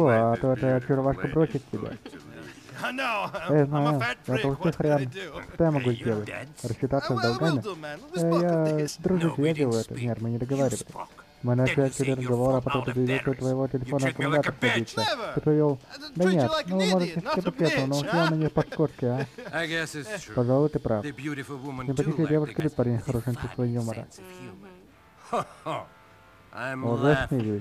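At 8.88, 15.08, 18.72 and 22.6 s the sound jumps ahead with no gap, skipping roughly 70, 40, 40 and 70 ms of material. That's likely a dropped buffer (overrun), where chunks got overwritten before being read and the edges were spliced together.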